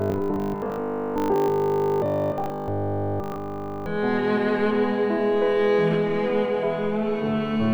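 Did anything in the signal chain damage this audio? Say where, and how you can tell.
Yes. From 0.02 s to 3.86 s the sound becomes a rigid, metallic 50 Hz buzz, the robotic sound from repeated short buffers. Essentially all of that stretch is repeated material rather than fresh audio. The cause is likely an underrun at the driver or buffer stage: new data arrived too late, so the last block was replayed while incoming audio was dropped. A 50 Hz repeat rate fits a 20 ms buffer.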